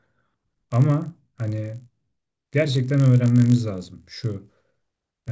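Resampler restarted on every block, throughout the clip: the conversion was run on each 20 ms block in isolation, so the filter at every block edge worked from silence or the wrong end of the same block instead of the true neighbouring samples. Each boundary therefore carries a small error, and at this block length the errors fuse into a steady 50 Hz buzz riding under the speech. The buzz falls away in pauses. The conversion was from 48 kHz to 16 kHz.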